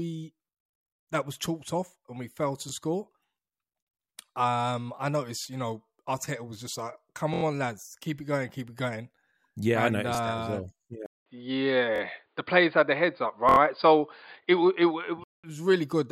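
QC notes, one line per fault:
7.34–7.43, 11.96–12.01 and 13.49–13.58 s, repeated buffer: a 23 ms piece, which fits a 1024-sample buffer, replays two to four extra times with hard joins. At 7.34 s this stutter comes just before "on lads keep it". It adds sound rather than losing any, unlike a dropout.
11.06–15.44 s, input switched to a poorer device: after a 200 ms silence the sound turns dull and boxy, with nothing above 4.8 kHz. The level shifts by about 5 dB and a new noise floor appears roughly 50 dB down, likely from a change to a weaker input. Tone, level and noise all change together, unlike a simple filter.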